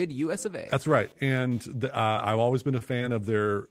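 Throughout the speech, computer activity noise is present. Load changes in the machine are disturbing the audio circuit's shared ground, which produces a faint buzz pulsing at roughly 300 times a second and sitting about 35 dB below the speech.

At 2.07 to 2.11 s, just after "right and the" and before "I've always", a short stall from a late packet occurs. The packet arrived late, the jitter buffer ran dry, and the receiver held the last sound for about 18 ms before resuming, so the sound drags briefly.

From 2.13 to 2.17 s, short concealed packet loss follows. About 20 ms never reached the decoder, and the gap was filled by extending the preceding sound, heard as a quick smear.

At 2.79 to 2.83 s, after "I've always", another late-packet stall holds the sound for about 18 ms.

At 2.99 to 3.02 s, a second concealed loss papers over a 20 ms gap with a brief wobble.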